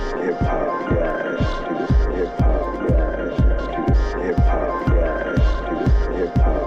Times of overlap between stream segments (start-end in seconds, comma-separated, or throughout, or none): none